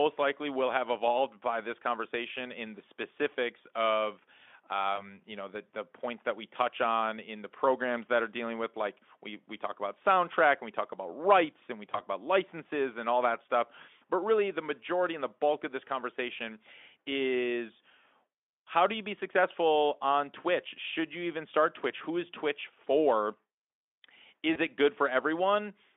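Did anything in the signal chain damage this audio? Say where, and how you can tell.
Yes, the network stage dropped packets three times, and the speech codec's packet loss concealment covered each gap. You can hear brief buzzy or noisy, smeared patches at 4.95–5.05 s just before "you know the the", at 11.91–12.02 s between "about rights and we" and "about licenses and all", and at 24.53–24.59 s right before "it good". Each sounds like a single lost 20 ms frame. The decoder stretched its last pitch and filter state across the hole and faded the gain. Because each frame builds on the previous one, the speech stays weak or distorted for a moment after audio resumes. The Speex narrowband line itself, roughly 250 Hz to 3.5 kHz, carries at most faint coding roughness.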